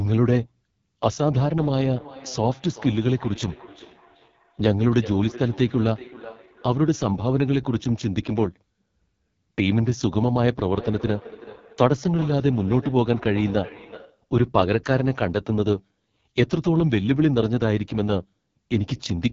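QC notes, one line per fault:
Throughout: AMR wideband (HD Voice) codec. The sound is rough and raspy, with a thin, noisy hiss standing in for real detail near the top and nothing above about 7.4 kHz. That heavy damage fits AMR-WB's lowest 6.6 kbit/s mode rather than plain low-pass filtering.
1.59–7.09 s and 10.7–14.26 s: feedback echo between two devices. Each phrase returns roughly 0.4 s later, thinner and ringing, peaking about 18 dB then about 15 dB below the speech. Unlike room reverb, the repeats are discrete and evenly spaced, as a second device's playback re-enters the microphone.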